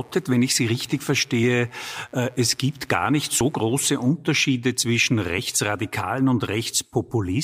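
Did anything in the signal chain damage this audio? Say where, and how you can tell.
Yes. Mains buzz runs from 0.0 to 4.10 s in the analogue wiring stage: a raspy 60 Hz buzz about 35 dB below the speech. Sharp switching spikes, twice per mains cycle, from a rectifier, dimmer or poor shielding, stack harmonics up into the kilohertz range.

Audio missing between chunks is heard at 1.43, 3.41 and 5.38 s, where the speech skips forward by a few tens of milliseconds with no gap. Regular skips roughly 2 s apart point to the driver or buffer stage, likely dropping material at each chunk changeover.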